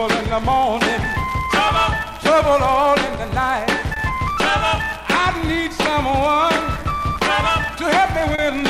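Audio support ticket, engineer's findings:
Clock drift between sender and receiver. Small timing hiccups recur at uneven intervals through the whole clip. Sender clock runs about 1% slow relative to the receiver. The jitter buffer slowly drains, so the receiver keeps repeating short slices to cover the shortfall. Waveform: tiny duplicated segments and slight seams at irregular spacing. Spectrogram: faint vertical discontinuities and briefly smeared frames. Component: receiver playout and clock recovery.

Short stall from a late packet, heard twice. First at 3.94–3.98 s, with about 20 ms of held sound and the delay stepping up by 20 ms. Second at 8.35–8.40 s, with about 30 ms held and the delay stepping up by 30 ms. Nothing lost, since playback resumes where it left off. Jitter buffer ran empty, so the last sound was stretched. Spectrogram: frozen horizontal band. Waveform: repeated cycle with a slight buzz or dip.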